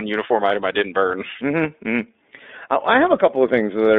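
From start to end, the speech carries plainly audible iLBC codec damage. The band is narrow, roughly 250 Hz to 3.6 kHz, so nothing above 4 kHz survives. Each 30 ms frame is coded on its own. The result sounds rough and synthetic, consistent with a 13.33 kbps setting.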